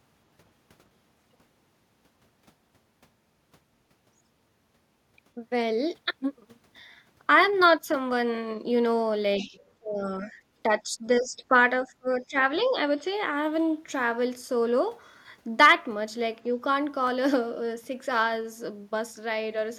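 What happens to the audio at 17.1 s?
Dropped samples at 17.07 s: a fraction of a millisecond of the stream is likely missing, so the waveform jumps abruptly, producing one sharp click in the speech.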